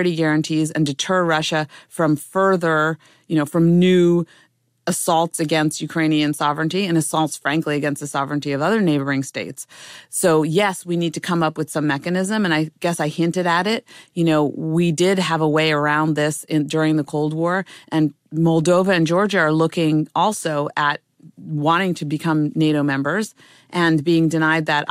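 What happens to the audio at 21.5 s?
At 21.5 s the speech carries on cleanly, with no dropout, click, distortion or other fault to be heard at that point.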